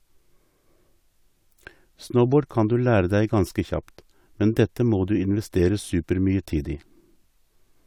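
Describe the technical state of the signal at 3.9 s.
At 3.9 s the speech signal is intact, with no audible dropout, clipping, distortion or other fault at that moment.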